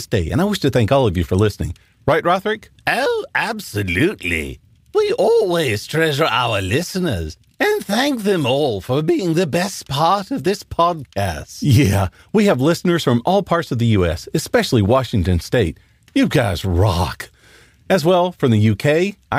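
No technical faults detected.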